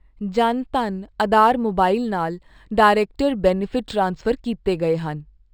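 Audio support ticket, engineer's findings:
Imaging from linear upsampling, entire clip. Dull top end; faint metallic shimmer on sibilants from a mirrored copy of the spectrum at 6 to 12 kHz, about 35 dB down, which fits a 12 kHz source raised to 44.1 kHz by straight-line interpolation. Unlike aliasing, the shimmer mirrors the speech band upward and tracks it, with no inharmonic tones folding downward.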